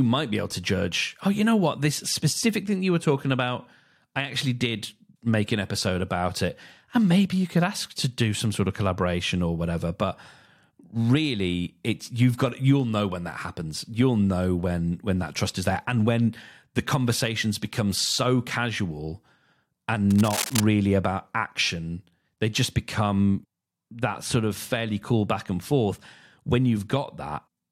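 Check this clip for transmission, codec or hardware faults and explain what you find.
One hardware fault is present. From 20.10 to 20.60 s, just before "about action they just", there is cable scratch noise. A worn cable or connector was likely moved, making contact resistance jump. Dense, uneven scratching sits only slightly below the speech.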